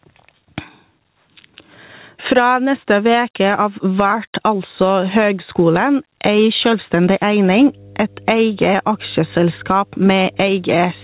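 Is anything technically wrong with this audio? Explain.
Yes. Gain pumping runs through the whole speech clip: the gain swings by around 15 dB, pulled down under each loud sound, likely from excessive gain with a fast limiter, unlike steady noise.

Mains hum enters at 7.49 s and continues to the end: a steady 50 Hz tone about 30 dB below the speech, from power-line coupling, constant rather than pumping.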